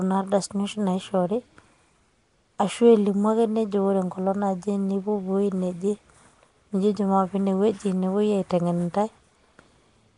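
From start to end, the speech carries a rough, hissy halo and a smeared, underwater blur. Nothing sounds above about 10.6 kHz. The likely cause is Nellymoser compression, Flash's microphone codec, filling starved bands with noise, at a rate fitting roughly 44 kbps.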